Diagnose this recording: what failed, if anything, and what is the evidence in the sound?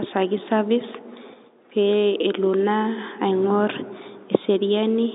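Nothing failed; no faults found.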